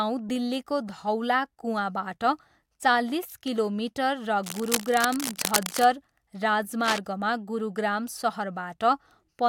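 From 4.43 to 5.86 s, and again briefly from 6.82 to 6.99 s, cable scratch noise rasps over the speech, only a little quieter than the speech itself. It's likely a worn cable or connector being moved, its contact flickering into dense, ragged rustling bursts.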